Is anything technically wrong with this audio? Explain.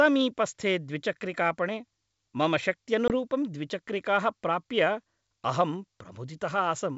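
Yes, there's a short dropout at 3.08 to 3.12 s, packet loss on an ADPCM call. About 20 ms of audio, likely a single packet, got swapped for silence. The decoder's predictor and step size then lose sync with the sender's, so speech resumes off-level or with a click and slight distortion before settling. The G.722 coding at 64 kbit/s around it sounds clean.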